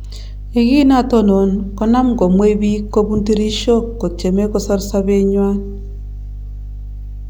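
Mains hum runs under the speech from start to finish. It is a steady low tone at 50 Hz, with a few low harmonics above it. Power-line current has leaked into the signal, likely through a ground loop or a nearby transformer. The hum sits only about 10 dB below the speech.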